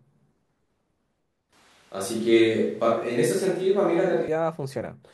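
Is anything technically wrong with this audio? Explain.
Yes. From 1.53 s to 4.28 s the recording has likely switched to a distant microphone, as if the close microphone's signal dropped out and a pickup further from the talker took over. The speech turns roomy and hollow, with thinner bass and a faint background noise floor, roughly 35 dB below the speech, while the overall level stays about the same. The change happens abruptly at both ends, so the close, full sound returns just as suddenly.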